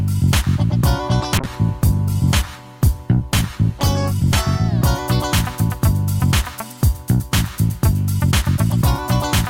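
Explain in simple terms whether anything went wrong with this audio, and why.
From 1.39 to about 4.75 seconds there's a call bitrate drop. The connection decided it had less bandwidth, so the encoder squeezed the audio into far fewer bits for over three seconds. That's why the sound goes rough and muffled there before clearing up.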